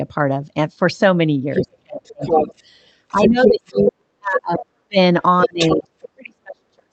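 At 1.54 to 1.63 s a second, foreign voice briefly intrudes about 5 dB below the main speech. This is the other side's voice leaking through, likely loudspeaker echo that the echo canceller failed to remove. On a spectrogram it appears as a separate, unrelated harmonic stack laid over the talker's. It returns at roughly equal level from 2.05 to 2.62 s and from 3.1 to 3.92 s, then about 5 dB down from 5.59 to 5.77 s.

From 1.62 to 2.55 s the talker's own speech is suppressed in double talk, dipping by as much as about 35 dB over roughly 0.7 s. The canceller likely treated the overlap as echo and attenuated everything. It happens again from 3.11 to 4.97 s, with dips of up to about 40 dB across roughly 1.5 s, and from 5.45 s to the end. The waveform shows collapsed, choppy envelopes, and the spectrogram thins and fades into dark gaps. Throughout, the Opus call path's spectrum stops near 8 kHz.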